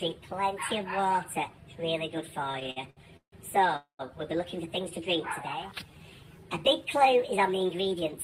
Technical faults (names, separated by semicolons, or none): repeated stalls (stutter); call audio freeze; jitter buffer slow-down